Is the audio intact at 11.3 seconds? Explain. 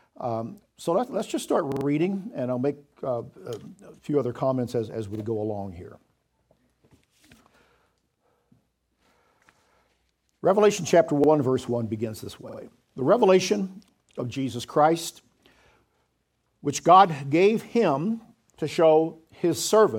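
No. A repeated buffer occurs from 11.24 to 11.29 s: a roughly 46 ms block is played one extra time with hard joins, producing a brief stutter.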